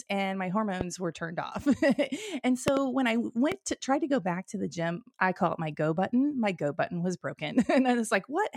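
Four loud pops land on top of the speech, which carries on underneath each one. The first is at 0.81 to 0.83 s, between "and my" and "were turned off". A quick double pop follows at 2.68 to 2.79 s, just before "when I". The last is at 3.52 to 3.54 s, between "when I" and "to try to go". They stand about 15, 20 and 15 dB above the speech, sharp pulses that likely come from a voltage spike from a plug, switch, static or driver glitch.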